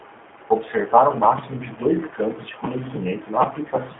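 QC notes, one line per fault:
throughout, G.729 codec: rough, synthetic speech consistent with 8 kbit/s pulse-coded synthesis; spectrogram shows energy only from 250 Hz to 3.5 kHz, empty above 3.8 kHz.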